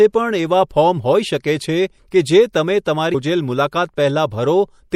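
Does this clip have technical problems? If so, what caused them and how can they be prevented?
Yes. The speech sounds watery and swirly throughout, with dull treble and smeared s sounds. This is MP3 compression, likely at about 64 kbps. Short of bits, the encoder cut the highs and dropped weak detail frame by frame. Encode at a higher bitrate to prevent it.

From 3.13 to 3.16 s there is a brief blip. This is damaged data in the compressed stream. Corrupted bytes made the decoder misread frames, lose sync and search for the next frame header. Reliable transfer with checksums prevents it.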